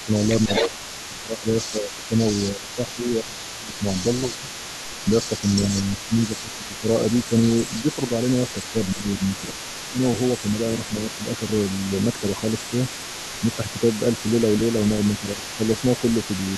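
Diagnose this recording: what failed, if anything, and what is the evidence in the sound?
Call processing failed. An echo leak runs through the whole recording: a faint copy of the speech trails it by 150 ms, roughly 15 dB below. The far end's echo canceller likely left part of its loudspeaker pickup in the returned signal.

Call processing also shows speech suppressed in double talk, at 0.04–4.5 s, 5.05–8.11 s, 8.72–11.22 s and 13.4–13.74 s. The speech dips in short patches, by up to about 10 dB. The canceller likely mistook overlapping talk for echo and turned both down.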